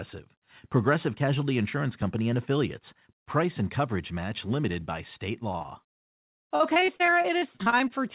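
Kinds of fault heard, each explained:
Repeated packet loss (robotic sound): From 5.52 to 7.92 s the speech breaks up again and again. There are over twenty short holes, the longest about 41 ms. Each hole is covered by stretching the sound just before it. About a fifth of that stretch is patched this way. The patches come so close together that the voice turns choppy. It is heard through a narrowband call path with nothing above 4 kHz, which fits G.711.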